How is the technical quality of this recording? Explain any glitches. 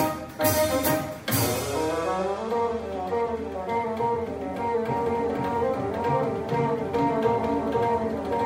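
The recording carries a doubled audio track from 4.88 s to the end: a second, equally loud copy trails the original by about half a second, starting abruptly with no decay or room colour. It likely comes from a slower capture path mixing the same audio in again.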